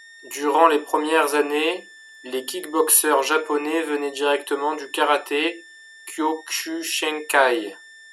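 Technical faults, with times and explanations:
Throughout, switching supply whistle: a thin high tone, wandering between about 1.77 and 1.83 kHz, sits roughly 25 dB under the speech. It points to a switching power supply running in an audible burst mode, its pitch shifting as the load changes.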